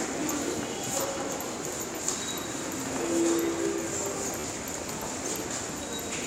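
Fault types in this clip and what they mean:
Bluetooth stutter: Data on the wireless link arrived late or went missing. The receiver filled the gap by replaying its last short slice of sound. The first dropout is a brief single repeat at 1.78 s, covering about 13 ms, which fits one lost packet. The second, from 4.40 to 4.44 s, repeats several times into a short buzzing stutter over 40 ms, which fits about three lost packets. The sound then resumes further on, as if it had kept playing.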